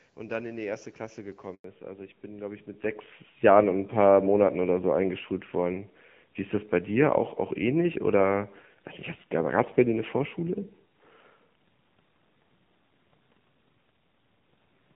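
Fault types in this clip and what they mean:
Handover gap: the call switched networks and no speech frames arrived during the move, so the speech dies away within a few tens of milliseconds at about 1.54 s and stays silent for 100 ms until the new link carries audio again; whatever was said in that stretch is gone.
Fallback to narrowband: after the handover the call dropped from HD Voice to a narrowband codec, and from about 1.64 s to the end nothing above 4 kHz remains, leaving the speech duller and rougher, which fits a rate near 7.4 kbit/s.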